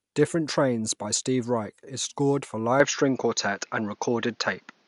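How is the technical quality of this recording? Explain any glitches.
The recording has one clear fault: the input likely switched to a poorer device partway through. From 2.80 s, right after "is scored for", to the end, the audio comes through a different, lower-grade input path. That device passes nothing above 6.8 kHz, so the speech turns dull and boxy and loses its airy top end. The switch is seamless, with no gap, but the level shifts by roughly 5 dB, and a faint new background noise appears well below the speech.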